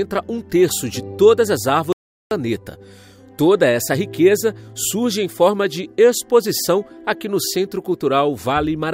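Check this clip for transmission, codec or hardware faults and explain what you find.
One fault is present. From 1.93 to 2.31 s there is an audio dropout to silence: input was likely lost while silence was written, leaving 387 ms of dead silence without room tone.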